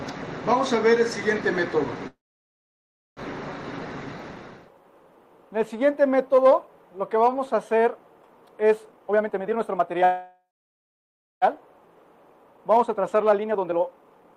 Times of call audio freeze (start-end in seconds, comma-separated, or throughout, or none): 2.07-3.20, 10.04-11.45